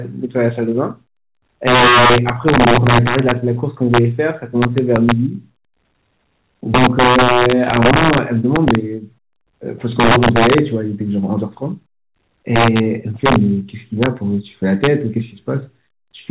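Violent, sharp cracks burst out of the loudest moments of the speech all the way through the clip, harsher and more abrupt than ordinary clipping. This is integer overflow. The signal was pushed about 6 dB past the largest value the integer format could hold, and instead of being limited, each sample over the ceiling wrapped around to the opposite sign, jumping across the full range. Only a couple of percent of samples cross that line, so the cracks land on peaks rather than smearing everything. They ride over telephone-band audio with nothing above 4 kHz, which fits G.711 A-law coding.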